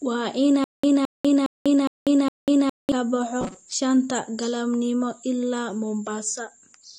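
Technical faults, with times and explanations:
throughout: AAC compression, nothing above 9.6 kHz, smeared dull texture; spectrogram shows a hard ceiling, likely from AAC-LC at a low bitrate around 32 kbps.
0.64–2.92 s: stutter with silent gaps, a 216 ms burst replays five times every 411 ms with 194 ms digital silence; waveform shows identical blocks between flat lines, likely a stalled stream.
3.41–3.73 s: robotic sound from repeated short buffers, a rigid 188 Hz buzz from roughly half the audio being repeats; spectrogram shows an evenly spaced harmonic comb, likely from about 5.3 ms buffers.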